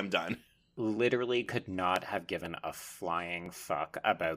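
Periodic USB or driver dropouts: something stalls the audio path every 0.5 s from 0.47 to 3.96 s, skipping about a millisecond each time, so the speech carries regular ticks.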